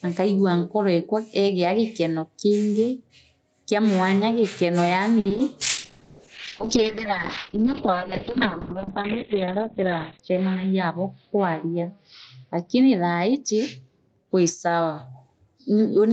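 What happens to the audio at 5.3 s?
At 5.3 s the audio is inside a burst of repeated packet loss (robotic sound) running from 5.19 to 5.40 s, right after "kia mwanya gikona". Within that fifth of a second, pieces keep dropping out and each hole is bridged by stretching the last received sound forward, which fits about five separate losses. Roughly 100 ms is synthetic fill and 40 ms is simply missing, with the longest gap around 60 ms. Nearly half the span is patched, so it sounds choppy.

Underneath, gain pumping is present here as throughout the clip. The level swells and ducks by around 5 dB as loud speech arrives, squashing the dynamics. This is likely caused by input gain set far too high, with a fast limiter or compressor clamping it on every peak.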